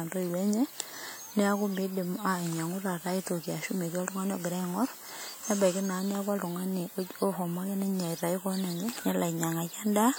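Speech, with plainly audible transform-codec damage running through the whole clip, most likely WMA compression at a rate that fits about 48 kbps. Quantisation noise is smeared over tens of milliseconds around each sound, giving a ringing, washy quality and a hiss that swells and fades with the speech. What separates it from a low-pass or band-limited fault is that content still reaches 20 kHz. The damage is smearing and noise, not a dulled top end.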